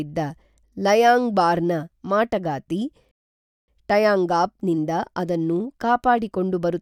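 A speech recording whose flow breaks off at 3.11 s, just after "ಲೈಯಾಂಗ್ಬಾರ್ನ ಮಾಟಗಾತಿ", into dead silence until 3.68 s, then picks up cleanly with "ಟೈಯಾಂಗಾಪ್ ನಿಂದ ಅದನ್ನು" as if nothing had happened. This is a rebuffering stall: playback drained its store of downloaded audio, halted, and waited for more data before continuing from the exact same point. No speech is skipped, but roughly 0.57 s of extra silence is inserted into the timeline.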